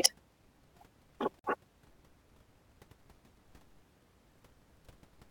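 At 1.39 s the speech breaks off into a silence of about 48 ms, ending at 1.44 s: a gap at a join of encoded pieces, where separately encoded segments were butted together with their encoder start delay and end padding left in. Unlike a packet dropout, nothing is lost. The sound resumes exactly where it stopped, and the codec softens both abrupt edges.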